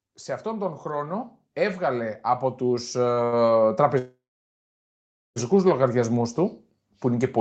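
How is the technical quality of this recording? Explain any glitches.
The recording has clear technical problems: a slow, large level rise, two brief stalls, and one long gap. It comes through a call path, with nothing above 8 kHz and the coding texture of a call codec.

Automatic gain rising runs from 0.43 s to 6.43 s, ending just before "που είναι και πολύ". The gain control judged the input too quiet and kept raising its gain. The total rise is about 14 dB. Speech and background noise swell together, so the clip grows steadily louder and the noise floor climbs with it.

Two short stalls from a late packet occur at 3.13 s and 3.25 s. Each time a packet was missing when due, and the jitter buffer ran empty. The receiver held the last sound until the packet came, then resumed where it stopped. The first hold lasts 33 ms and the second 76 ms. Nothing is lost. The sound briefly drags, with a slight buzz or dip.

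A call audio freeze follows from 3.98 s to 5.38 s. The last sound carries on as a fading buzz or hiss, and the whole gap lasts about 1.4 s. Most of that stretch is silence, roughly 1.2 s. The cause is likely packets held up in transit, which emptied the jitter buffer until they arrived. Playback then picks up exactly where it broke off. The speech is delayed by a gap, but nothing is dropped.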